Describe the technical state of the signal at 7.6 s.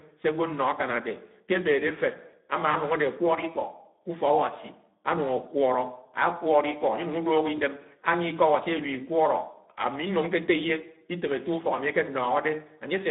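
Just before 7.6 s, from 7.55 to 7.59 s, there is VoIP packet loss concealed by the speech codec. The gap fits a single lost 20 ms frame. Rather than dropping to silence, the decoder repeats its last pitch and filter at falling gain. That gives a brief fading smear, and the voice stays weak or distorted past the gap.

Underneath, the Speex codec damage is plainly audible. The speech is hoarse and noisy, which points to a starved CELP excitation at roughly 11 kbps. It sits in a narrow 150 Hz to 3.7 kHz line band with no noise-filled upper band, unlike wideband codecs.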